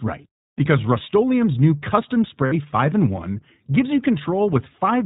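The whole clip runs through the iLBC codec, and you can hear it plainly. Everything above 4 kHz is gone, so the speech sounds narrowband and boxed-in, with that slightly rough, synthetic edge iLBC puts on the excitation. The texture points to the 15.2 kbps mode with 20 ms frames, where each frame is coded on its own without borrowing from the one before. That keeps the voice intelligible but never quite natural.

At 2.46 s there's a short dropout running to about 2.54 s. These are lost iLBC frames: roughly 60 ms went missing, which fits three 20 ms packets. The decoder papers over the gap by repeating the last pitch cycle mixed with noise, so instead of silence you get a brief held, faintly buzzy vowel. Because each iLBC frame stands alone, the speech snaps back to normal almost immediately after 2.54 s.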